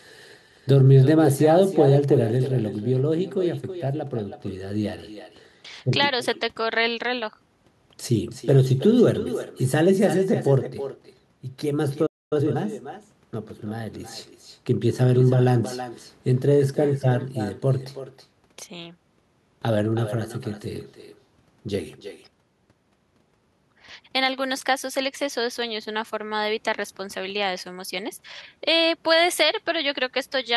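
Speech runs through the whole recording with an echo with no canceller: every phrase is followed roughly 300 ms later by a copy about 13 dB quieter that sounds thinner than the direct voice. That points to the far end playing the call over a loudspeaker and its microphone sending it straight back with nothing subtracting it. Unlike room reverberation, which smears into a continuous tail, this is a distinct, separate repeat after a clear gap, the length of a network round trip. At 12.06 s a playback stall cuts the sound off mid-flow, and it stays silent for about a quarter of a second until 12.33 s. That silence likely comes from the player running out of buffered data or having its playback thread blocked. It differs from a packet-loss dropout, which is much shorter and usually patched over, because here the output simply stops for a plainly audible stretch and then resumes. From 12.33 to 12.57 s the player makes a time-compressed catch-up, running the backlog at 2.0 times normal speed to regain the lost time. 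Pitch stays where it was, which separates this from a sample-rate mismatch or a tape-style speed-up that would raise the voice. What gives it away is the hurried pace from the small spliced and cross-faded pieces.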